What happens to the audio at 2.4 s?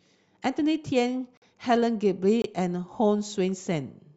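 A gap between stream segments, 2.42 to 2.44 s: segment timestamps leave about 23 ms unfilled, so hard-edged silence is inserted. Unlike a dropout, no speech is lost.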